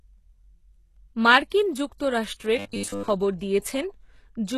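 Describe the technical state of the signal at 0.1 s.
At 0.1 s the speech carries heavy coding damage that runs through the whole clip, likely HE-AAC compression at a rate fitting about 16 kbps. Nothing sits above 12.3 kHz, and the treble is rebuilt from copied lower bands, so harmonics misalign and sibilants turn gritty, metallic or lispy.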